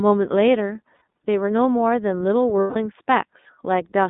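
You're hearing speech that has gone through the iLBC codec end to end. It's narrowband, with nothing much below 200 Hz or above 3.7 kHz, and it has that slightly rough, synthetic edge you get from coding each frame's excitation on its own. The plainly audible damage fits iLBC's 30 ms, 13.33 kbps mode. There are also two spots of lost iLBC frames. At 0.96 to 1.01 s a 60 ms gap, which fits two dropped frames, gets filled with a held, slightly buzzy or breathy repeat of the last pitch cycle. At 2.61 to 2.77 s it's longer, 150 ms, so that concealment drags out into a fading, slightly buzzy or breathy vowel-like smear. The speech snaps back right after each one, since no frame depends on the one before it.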